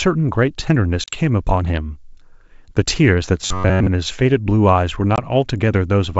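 Packet loss on an ADPCM call opens a hard-edged gap from 1.04 to 1.16 s, about 40 ms of audio, roughly two packets, replaced by silence. The decoder's adaptive predictor and step size lose sync with the sender, so speech returns slightly distorted before settling.

From 3.42 to 3.88 s the speech becomes a rigid metallic buzz at 93.8 Hz, robotic sound likely caused by a short buffer of about 10.7 ms being replayed while most of the real audio is skipped, though the contour still loosely follows the speech.

A second, shorter loss of 20 ms, about one packet, cuts in at 5.16 to 5.19 s.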